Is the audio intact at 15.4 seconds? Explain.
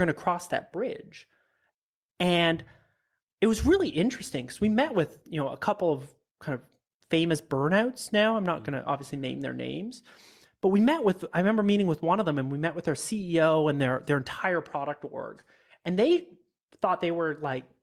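No. Short concealed packet loss hits at 15.41 to 15.45 s, between "their entire product org" and "and they". About 20 ms of audio arrived too late. The receiver extended the preceding sound to cover the gap, leaving a brief smear.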